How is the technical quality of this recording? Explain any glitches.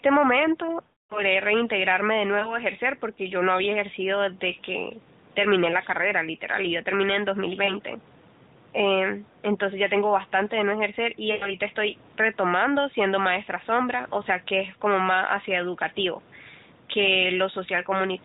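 Quality is hurt by lost AMR speech frames. Radio errors corrupted frames, so the decoder repeated the last good pitch and vocal tract settings at falling gain. This causes a fading, drawn-out smear at 0.84–1.23 s, a brief warble at 2.40–2.53 s, and short dips at 7.64–7.74 s and 11.3–11.5 s. The band-limited AMR narrowband mobile codec sound points to a high-rate mode with light coding damage.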